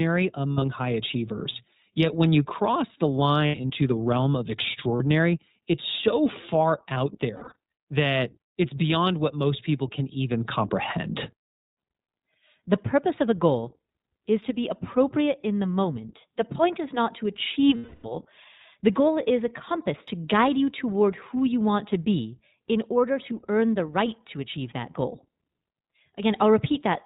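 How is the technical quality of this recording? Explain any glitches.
The recording is compromised: the whole clip has gone through a low-rate VoIP codec, and packet loss leaves five short glitches in the speech.

The iLBC codec, at a rate that fits 15.2 kbps with 20 ms frames, cuts everything above 4 kHz and codes each frame's excitation independently. The speech therefore sounds narrowband, slightly rough and synthetic throughout, with plainly audible codec damage.

Lost iLBC frames occur at 0.52–0.70 s, 3.46–3.71 s, 4.96–5.02 s, 7.36–7.56 s and 17.76–18.06 s. When packets go missing, the decoder fills the gap by repeating the last pitch cycle mixed with noise and fading it as the loss continues. Each gap sounds like a held, buzzy or breathy vowel. The first, second and fourth are scattered drops with runs of roughly 70 ms. The last is a solid 280 ms hole, and the voice is right again almost immediately after each one.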